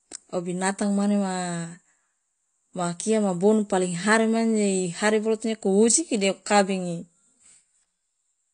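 Speech, dull and smeared throughout with nothing above 9.8 kHz. That's likely AAC compression, and the plainly audible damage fits a low bitrate around 32 kbps.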